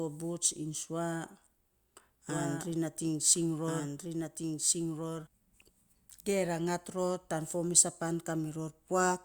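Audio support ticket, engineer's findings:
Second capture path or edit overlap likely feeding the same signal in twice. Doubled audio track, 2.29 to 5.27 s: a full-band copy of the speech about 1.5 s behind, roughly 5 dB down, clean with no reverb tail or room colour. It cuts in and drops out abruptly at both ends.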